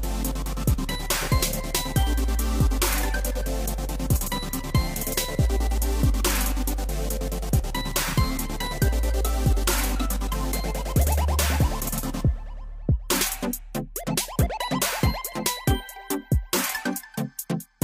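No technical faults can be heard anywhere in the recording, and the signal holds steady throughout.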